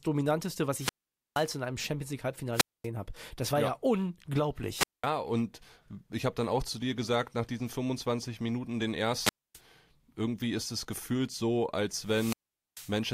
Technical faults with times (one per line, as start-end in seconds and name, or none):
0.72-1.50 wireless microphone squelch dropout
2.52-2.88 wireless microphone squelch dropout
4.73-5.07 wireless microphone squelch dropout
9.19-9.60 wireless microphone squelch dropout
11.99-13.00 wireless microphone squelch dropout